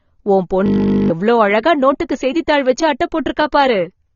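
Throughout, the speech sounds dull and smeared, with nothing above 7 kHz and plainly audible warbling on sibilants, likely AAC compression at a low bitrate, which fits 24 kbps AAC-LC. From 0.66 to 1.1 s a steady 50 Hz buzz replaces the speech: a system hang loop, where the sound hardware kept replaying one 20 ms piece of buffer while the system froze, losing around 0.4 s of audio.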